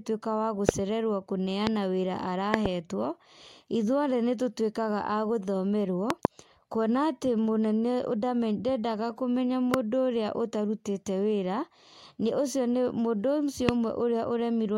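Sharp pops, roughly 20 dB above the speech, cut in at 0.69–0.71, 1.67–1.69, 2.54–2.68 (a double), 6.10–6.27 (a double), 9.74–9.76 just after "ndendaga kũmenya", and 13.69–13.71 s. These loud pops likely come from voltage spikes from a switch, plug or driver glitch.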